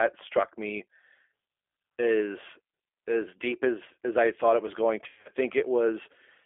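Throughout, the speech sounds narrow, rough and slightly synthetic, with nothing below 300 Hz or above 3.4 kHz, which fits the G.729 codec rebuilding each frame from a vocal tract model at about 8 kbit/s.

From 5.04 to 5.30 s, just after "thought it was going", the speech breaks into stretched, fading fragments. This is VoIP packet loss concealed by the speech codec: about 160 ms of audio went missing across 220 ms, in runs up to 80 ms, and the decoder extrapolated its last pitch and filter.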